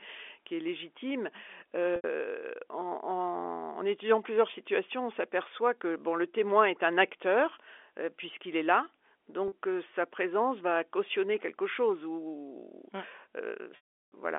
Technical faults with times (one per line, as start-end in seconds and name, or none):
1.96-2.04 packet loss with pitch repetition
9.48-9.52 packet loss with pitch repetition
13.76-14.12 packet loss with pitch repetition